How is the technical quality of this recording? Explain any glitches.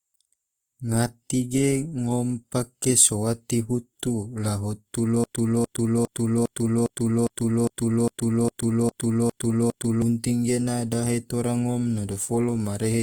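The technical quality is poor. Codec damage is plainly audible throughout, and a stuck loop replaces almost five seconds of the speech.

Opus compression (throughout): The speech has the noisy, rough, grainy texture of Opus in its music (CELT) mode, which fits a low bitrate of around 24 kbps. The encoder keeps each band's energy but, short of bits, fills detail with folded or noise-like content. Bandwidth stays fullband, reaching about 20.2 kHz. On a spectrogram, harmonics look smeared and speckled rather than cleanly striated, with few outright holes.

Broken-record loop (5.24 s to 10.02 s): Right after "sowate hutu la hutu", a fragment of about 0.41 s repeats back to back, twelve times, until "gena dahe tora ngom" resumes. The cause is likely a player or stream stall that kept resending its last buffered piece, so the audio that belonged there is lost. On a waveform, an identical 0.41 s shape tiles across the span, and the spectrogram shows the same block stamped repeatedly.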